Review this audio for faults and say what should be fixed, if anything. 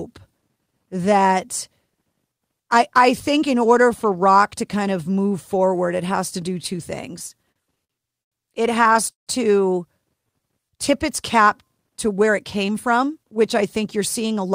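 Repeated stalls (stutter) run from 7.19 to 8.35 s: the jitter buffer emptied eight times as packets arrived late, and the receiver held the last sound each time, adding 241 ms in total (about 21% of that span, longest gap 101 ms). Nothing is lost, but the speech drags and stutters. Prevent it by giving the jitter buffer more headroom or fixing the upstream delivery-rate problem.

A short stall from a late packet occurs at 8.93 to 8.98 s: one packet missed its playout time, so the receiver stretched the preceding sound by 18 ms until it arrived and then resumed from the same point. A slightly deeper minimum buffer target would absorb this.

A call audio freeze sits at 9.11 to 9.30 s: the sound continues briefly as a fading buzz or hiss, then drops to about 140 ms of silence before the speech resumes where it stopped, with 161 ms inserted overall. The likely cause is packets held up in transit, emptying the buffer. 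Investigate network queuing and path stability to prevent it.

A jitter buffer slow-down at 10.21 to 10.40 s plays at 85% speed with unchanged pitch. The receiver repeated single pitch periods to add 38 ms of reserve, leaving the speech drawn out. Steadier packet arrival, so the buffer never runs low, prevents it.

A jitter buffer speed-up from 12.27 to 14.46 s plays at 107% speed with unchanged pitch. The receiver trimmed short pitch-period segments, removing about 150 ms of surplus delay, so the speech sounds hurried. Smoothing packet pacing at the sender prevents the bunching that can force this.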